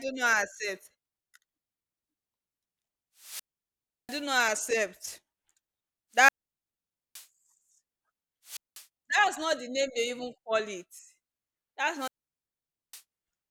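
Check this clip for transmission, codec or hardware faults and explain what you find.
The speech has four wireless microphone squelch dropouts, at 3.18 to 4.25 s, 6.13 to 7.27 s, 8.45 to 8.86 s and 11.96 to 13.03 s. Each brings a brief surge of hiss, then near silence lasting 0.70, 0.87, 0.20 and 0.86 s respectively, before the speech returns. The FM radio signal weakens until the receiver's squelch cuts the output.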